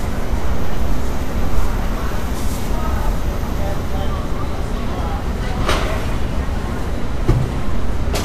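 Throughout, the sound is hissy and grainy, with blurred attacks and nothing above 14.2 kHz: likely Vorbis compression, whose coarse treble quantisation fits a bitrate near 35 kbps.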